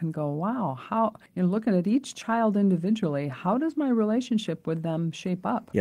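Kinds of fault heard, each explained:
No technical fault can be heard anywhere in the recording, and the signal stays steady and continuous throughout.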